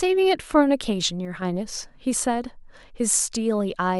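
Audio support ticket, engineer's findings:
Sudden gain jump, 1.25 to 1.42 s. Speech and background noise drop together by about 6 dB, then return, with no fade at either edge. Likely a digital gain change or bit shift applied instantly, without a ramp.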